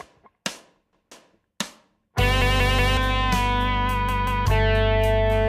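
The audio has three repeated-buffer stutters, where the playback device ran short of fresh data and replayed its last block. Each repeat is about 186 ms long, which fits an 8192-sample buffer. At 0.93 to 1.12 s one block sounds twice. At 2.42 to 2.97 s it sounds four times, and at 4.09 to 4.46 s three times. Each join is hard. Roughly 0.2 s, 0.5 s and 0.4 s of sound are lost.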